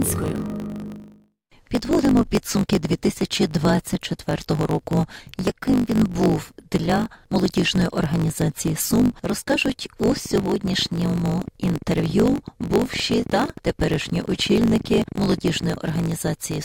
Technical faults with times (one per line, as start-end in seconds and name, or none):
0.00-16.64 block size mismatch (truncated)
10.03-15.96 train of clicks